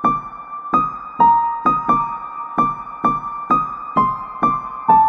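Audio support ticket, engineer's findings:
Sample clock jitter, 2.30 to 3.92 s. Fine hiss and roughness riding on the sound, strongest on loud, bright passages, gone in gaps. Probable component: converter clock. Timing wobble of around half a microsecond moves each sample slightly. Error tracks waveform slope, roughly 50 dB below signal.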